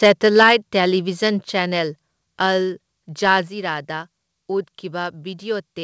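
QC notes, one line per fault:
3.48 s, microphone volume stepped down: voice and background drop about 4 dB, likely the call software cutting the mic input in one step.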